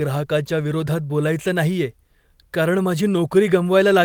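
No technical faults can be heard anywhere in this speech recording. There is nothing here that calls for a time or a value.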